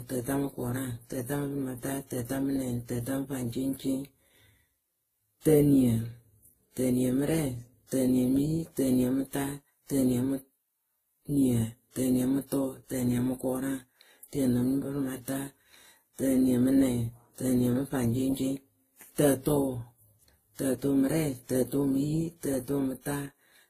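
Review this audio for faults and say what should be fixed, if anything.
Throughout, the speech carries several kinds of codec smearing at once with nothing above 14.9 kHz, likely transcoding between lossy codecs, where each pass re-encodes the previous one's artefacts. Mixed artefact signatures, rather than one codec's, separate this from simple low-bitrate coding. To prevent it, encode once from the original source.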